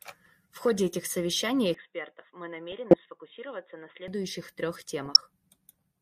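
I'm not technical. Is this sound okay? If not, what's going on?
No. DAB burbling occurs from 0.59 to 0.79 s, just before "этих совещаний", then from 2.72 to 2.99 s and from 5.06 to 5.17 s. Weak digital radio reception let errors slip into the audio data, so parts of the sound briefly jump about over the speech.

An input switched to a poorer device runs from 1.74 to 4.08 s, starting right after "этих совещаний". The speech suddenly turns quieter and duller, losing everything above 3.8 kHz, with faint new background noise. This is likely a change mid-recording to a lesser microphone or headset.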